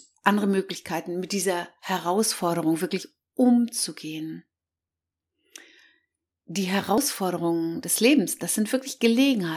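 At 3.03 s and 6.98 s, about 50 ms of speech is cut out. The sound jumps straight across each gap. This is likely audio missing between chunks of 4 s.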